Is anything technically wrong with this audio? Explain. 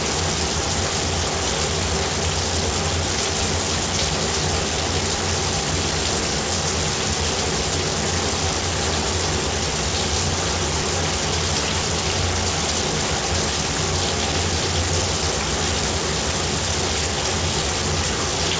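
Yes. Periodic USB or driver dropouts run from 0.11 s to the end. Every 0.1 s a background task stalls the USB bus or audio driver, and a short slice of audio is replaced by silence. The result is a steady ten-per-second ticking, audible only while sound is present. The call-path band limit, with nothing above 8 kHz, fits a G.722 codec at 64 kbps.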